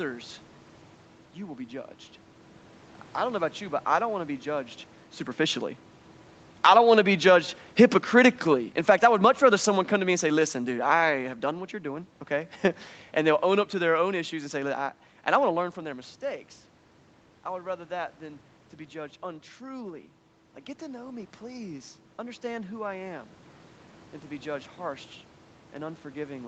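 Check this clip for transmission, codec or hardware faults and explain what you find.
Two gain-control faults stand out. Both are the automatic gain control reacting to level changes at the microphone, and both move the background along with the speech.

From 6.5 to 15.71 s the automatic gain is falling. Just before this, around 4.5 s, the talker moves at the microphone. The gain control treats the input as too hot and pulls its gain down by about 10 dB over roughly nine seconds. The speech starts loud and then sinks steadily, and the room noise sinks with it. That shared drop marks it as processing, not the talker.

From 15.76 s to the end the automatic gain is rising. Around 15.5 s the talker moves back and the input drops by about 11 dB. The gain control reads this as too quiet and slowly raises its gain over the last ten seconds or so. Speech and room noise swell up together, so the background becomes louder as the level recovers.

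Throughout, the Opus call path and the microphone processing leave nothing above 8 kHz, which gives the audio a dulled top.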